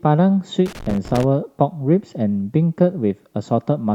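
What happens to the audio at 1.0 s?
At 1.0 s the speech is broken by loose connector crackle from 0.66 to 1.24 s: a worn contact making and breaking chops the signal into irregular scratchy bursts, unlike steady, periodic clicks.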